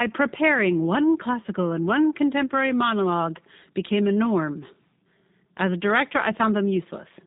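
From start to finish the speech has passed through a G.729 codec, and the sound points to the 8 kbit/s G.729A variant used in VoIP. Rather than carrying the waveform, the codec rebuilds the speech from a vocal tract filter, a pitch predictor and a few pulses per frame, with nothing above 3.8 kHz. The damage is plainly audible: the speech is dull and band-limited, with a rough, slightly synthetic buzz.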